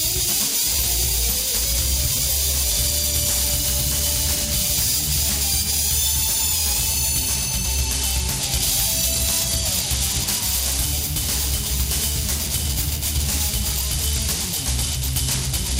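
At 2.69–3.51 s, 7.80–10.84 s and 13.72 s to the end, a Bluetooth SBC bit pool drop starves the top sub-bands and coarsens the rest. The treble dulls and gritty noise rises, consistent with a bit pool falling from 28 to 12 (about 96 kbps). On a spectrogram, the upper bands go dark and the remaining energy turns grainy.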